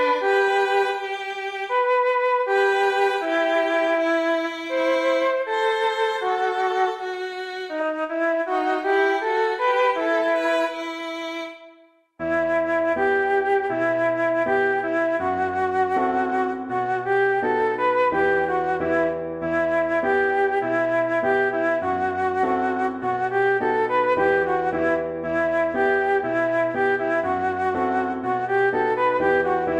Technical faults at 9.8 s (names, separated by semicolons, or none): none